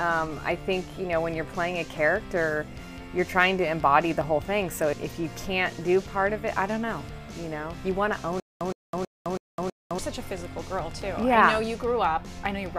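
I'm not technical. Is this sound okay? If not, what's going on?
No, not quite. From about 8.40 to 9.99 s there's a stutter with silent gaps: a tiny 116 ms snippet plays five times, each followed by about 209 ms of dead silence. Likely the playback stalled and kept retrying, so that stretch of sound is lost.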